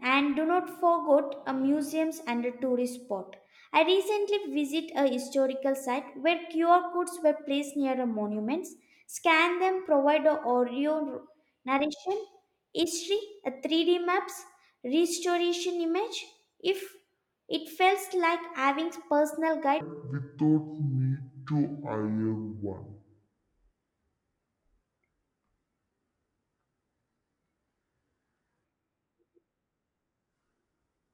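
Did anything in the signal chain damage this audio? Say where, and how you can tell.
Yes: a section at the wrong speed runs from 19.81 s, just after "feels like having personal", to the end. The speech plays at 0.53 times its recorded rate, dropping about ten semitones and dragging. This is likely a playback or editing-stage clock mismatch.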